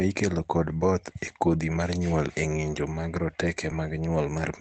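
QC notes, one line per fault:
1.27 s and 3.71 s, lost packet rebuilt from error correction: two brief moments where the sound turns rougher and noisier for about 20 ms each, with no gap or dropout. In each case a single packet went missing, and the following packet carried a low-bitrate backup copy through Opus in-band forward error correction. The decoder played that coarser copy in place of the original, so the audio continues but briefly loses detail against the surrounding call-quality sound, whose 8 kHz ceiling fits a wideband Opus stream.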